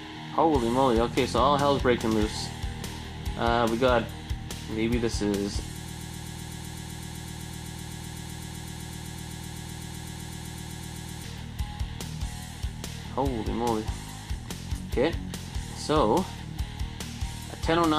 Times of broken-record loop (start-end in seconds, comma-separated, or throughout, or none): 5.87-11.24